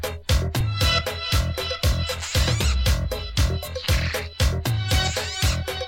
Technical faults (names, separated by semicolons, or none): repeated buffer